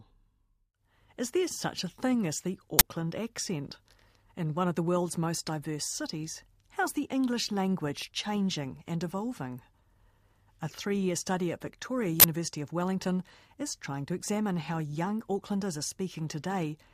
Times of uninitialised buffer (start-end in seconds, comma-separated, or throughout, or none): 2.79-2.81, 12.20-12.24